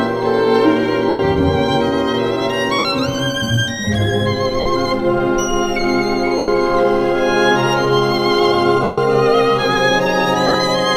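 A brief noisy smear replaces the sound at 1.09–1.19 s, 2.79–2.85 s, 4.60–4.66 s, 6.38–6.48 s and 8.83–8.98 s, and intermittently across 10.47–10.55 s in short runs of up to about 15 ms. These are lost LE Audio frames. The LC3 decoder refills each gap by repeating the last good spectrum with randomised signs, turning tonal content to hiss and fading the longer gaps. Gap lengths of 45–142.5 ms fit 7.5 ms frames.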